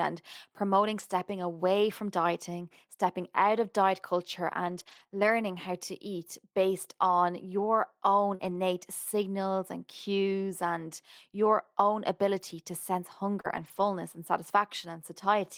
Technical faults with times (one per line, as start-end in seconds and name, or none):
0.99-1.01 lost packet rebuilt from error correction
4.67-9.25 scattered short gaps
13.41-13.46 short concealed packet loss
13.44-13.86 lost packet rebuilt from error correction